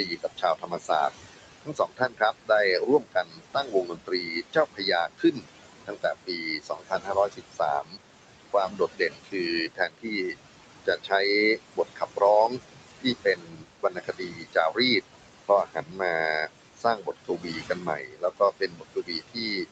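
Speech recorded through a call microphone chain, with the room noise sitting about 11 dB under the voice and nothing above 8 kHz. Noise suppressor artifacts run throughout: the background gets pulled down by about 21 dB frame by frame, sinking between words and rising under them. The suppressor also cuts speech, mistaking it for noise and dipping it by up to about 22 dB, at 0.06–0.91 s, 1.61–7.99 s, 8.53–14.79 s and 15.45–19.68 s, leaving quiet syllables and endings swallowed for several seconds in all.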